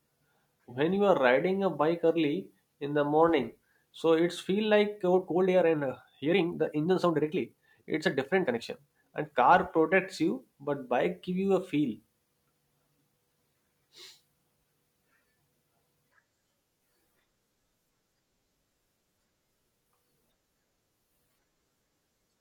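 From 4.95 to 9.43 s, after "morning so it's feel", a time-stretched section runs at 1.43 times speed with pitch unchanged, sounding rushed until "protects you but bike". Software likely squeezed it by dropping short pieces.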